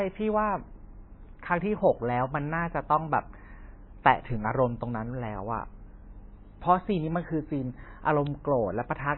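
Speech, and it's been squeezed hard the whole way through: nothing comes through above 4 kHz, so the top end is simply missing and the voice sounds dull and boxed-in. On top of that there's a watery, swirly quality, with quiet detail flickering in and out and consonant onsets smeared. That's likely heavy MP3 compression, and the damage fits a very low bitrate, somewhere around 18 kbps, where the encoder chops the treble and drops weak frequency content frame by frame.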